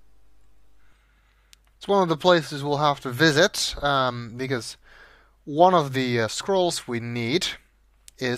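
Nothing goes wrong anywhere in this audio, so there's no technical fault to point out.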